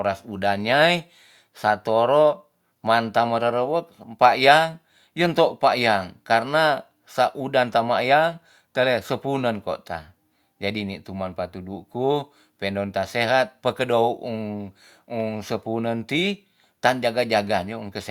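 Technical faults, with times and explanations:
No technical faults are audible anywhere in this speech recording.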